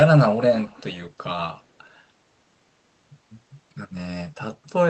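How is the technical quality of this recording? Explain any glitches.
The main glitch is a brief echo leak in the speech from 0.57 to 0.97 s. A faint delayed copy of the talker trails the original by about 355 ms, roughly 20 dB quieter. The likely cause is a far-end loudspeaker whose echo canceller let part of its microphone pickup through and sent it back down the call. It sounds like a ghost of the speech, briefly audible before it drops out. The audio is band-limited around 8 kHz with coding noise, which fits a wideband Opus call path.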